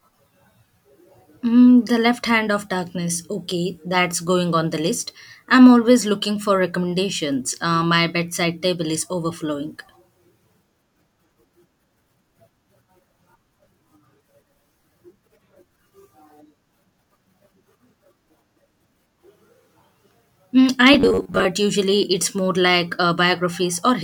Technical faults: robotic sound from repeated short buffers

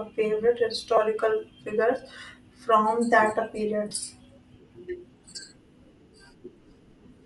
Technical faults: Bluetooth LC3 compression; lost LE Audio frames

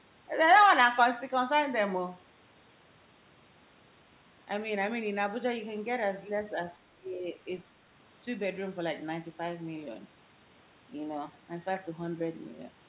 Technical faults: speech suppressed in double talk

